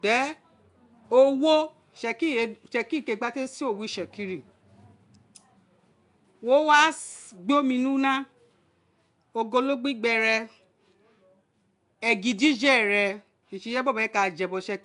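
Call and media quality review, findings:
Nellymoser compression, throughout the clip. Rough, hissy halo around the speech, smeared underwater quality, plainly audible codec damage. Nothing above 10.6 kHz. Likely the Flash-era Nellymoser Asao codec, at a rate that fits about 44 kbps. Fixed bit budget per short block leaves weak bands unfunded; those bands are refilled with synthetic noise, and block coding smears transients.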